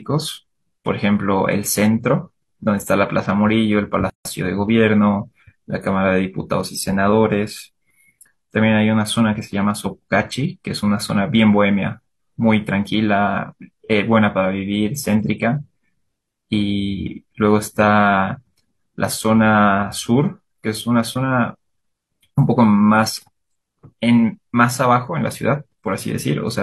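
A gap at a join of encoded pieces opens at 4.10 s and lasts until 4.25 s, a silence of about 154 ms cut into otherwise continuous speech. The audio was encoded as separate sections and spliced without trimming, so the encoder's start-up delay and the padding of the previous section's final frame both survive at the seam. The dropout has edges smeared by the codec, and the speech resumes exactly where it broke off.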